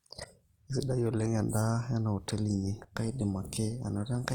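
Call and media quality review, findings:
Whole clip, throughout: likely Opus compression, CELT music mode, rate starved, which fits roughly 24 kbps. Encoder keeps band energies but fills starved bands by folding lower ones or with noise. Result: speech sounds plainly rough, noisy and grainy rather than swirly. Bandwidth stays full, reaching about 20.1 kHz.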